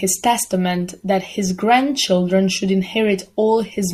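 No technical faults can be heard in this speech recording, so there are none to describe in time order.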